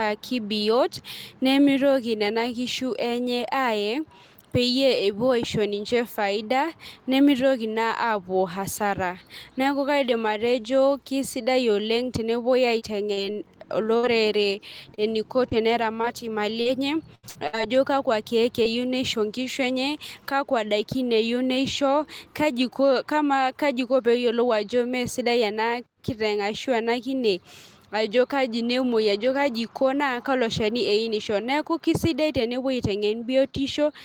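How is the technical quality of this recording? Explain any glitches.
The speech has packet-loss damage concentrated between about 12.8 and 18.7 seconds, heard as several short patches, one longer gap and a choppy stretch.

Short concealed packet loss occurs three times: 12.79 to 12.83 s, 13.13 to 13.19 s, and 18.63 to 18.67 s. Each time, roughly 20 to 40 ms of audio failed to arrive in time. The receiver patched the hole by extending the preceding sound, then blended back into real audio. You hear a quick smear or wobble. A brief consonant may drop out.

A burst of packet loss follows at 13.97 to 14.05 s. Here about 60 ms went missing in one run. The decoder carried the last sound forward while fading it down. A voiced sound becomes a short held buzz. Unvoiced sound becomes a dimming hiss. Then the speech picks up further along. The audio that belonged in the gap is simply gone.

Repeated packet loss (robotic sound) runs from 14.95 to 17.55 s. 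Seven separate gaps fall inside this stretch. Together they remove about 300 ms, around 12 percent of the span. The longest single gap is 80 ms. Each hole is filled by extending the previous sound, and the next loss arrives soon after. The speech turns choppy, with small pieces missing throughout.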